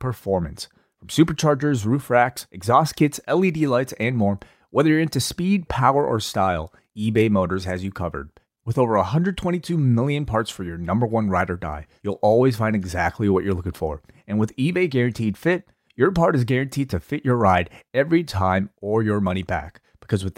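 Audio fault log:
Nothing stood out on listening to this speech recording.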